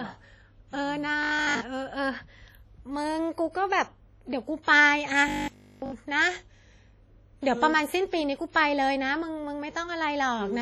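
Throughout, the speech sounds heavily washy and ringing, with hiss that breathes along with the signal. This is most likely WMA compression at a low bitrate, where long transform blocks smear quantisation noise and drop weak detail.

From 1.23 to 1.61 s the sound turns into a rigid, metallic 50 Hz buzz. This robotic sound from repeated short buffers likely comes from about 20 ms chunks being replayed while much of the real audio is skipped.

From 4.63 to 4.67 s, a short hiss of about 50 ms leads into an attack that sounds soft and smeared. This pre-echo happens because the codec spreads noise meant for the loud onset across the quiet moment before it.

From 5.28 to 5.92 s the same robotic sound from repeated short buffers returns as a fixed 50 Hz metallic buzz. Here essentially all of the audio is likely replaced by repeated 20 ms chunks, so little of the original comes through.

From 8.51 to 8.55 s, pre-echo again puts about 45 ms of hiss before an attack and blurs its onset.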